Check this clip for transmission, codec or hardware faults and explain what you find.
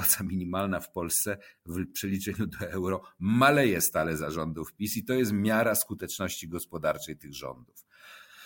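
Nothing wrong can be heard anywhere in the recording.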